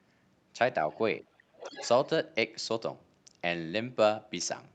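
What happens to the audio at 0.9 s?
A brief trace of the other side's voice leaking through appears from 0.92 to 0.96 s. It is very faint, far below the main speech. The likely cause is the loudspeaker's playback reaching the microphone and an echo canceller leaving a small scrap of it behind.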